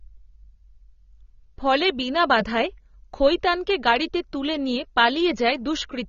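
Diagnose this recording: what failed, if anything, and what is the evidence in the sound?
Codec stage. The speech is dull throughout, cut off above 6.9 kHz and plainly smeared. This fits likely AAC compression at around 24 kbps.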